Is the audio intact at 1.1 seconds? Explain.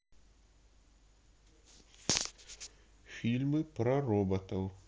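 Yes, the speech at 1.1 seconds is intact, with no fault at that moment.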